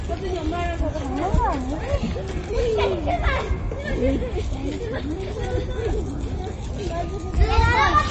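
From start to finish the audio has plainly audible MP3 compression damage, likely from a low-bitrate encode of around 31 kbps. Nothing remains above 8.3 kHz, so the top is dull. The encoder, short of bits, has also zeroed weak frequency lines that flicker on and off between frames, giving a watery, swirling texture and smeared attacks. A spectrogram would show a flat ceiling at 8.3 kHz and patchy, blocky holes below it.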